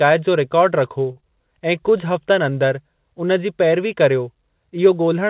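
At 1.12 s a short stall from a late packet begins. The jitter buffer ran dry, so the last sound is held for about 39 ms, to 1.18 s. Then a short concealed packet loss follows from 1.20 to 1.24 s. About 20 ms never arrived and was patched with a brief smear, heard through the narrow 4 kHz band of the G.711 call path.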